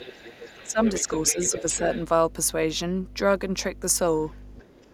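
Mains hum runs through the whole clip, a steady 50 Hz tone with low harmonics sitting only about 10 dB below the speech, from ground-loop or transformer coupling into the signal path.

Other side's voice leaking through appears from 0.0 to 2.04 s, a second voice about 15 dB under the talker, likely loudspeaker playback that the echo canceller failed to remove from the microphone.

Speech suppressed in double talk overlaps it at 0.64–0.80 s (dipping about 10 dB), 1.02–1.09 s and 1.33–1.81 s (about 5 dB each). While both voices are present, the talker's level sinks, likely because the canceller attenuated everything rather than separate near speech from echo.

Other side's voice leaking through returns faintly at 4.26–4.39 s and 4.55–4.93 s, now well below the speech, likely residual echo slipping past the canceller again.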